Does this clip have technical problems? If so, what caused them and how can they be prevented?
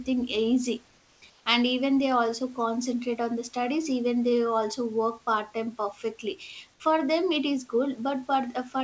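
Yes. From 0.88 to 1.22 s and again from 1.30 to 1.46 s, the room background is replaced by comfort noise: a steady, featureless hiss about 3 dB quieter than the real background, which sits about 35 dB below the loud parts. The likely cause is discontinuous transmission. During these pauses the sender's voice detector stopped sending audio, and the receiver filled the gaps with synthetic noise. The audio has no content above 8 kHz, which fits a G.722 call path. To prevent this, disable DTX on the sender.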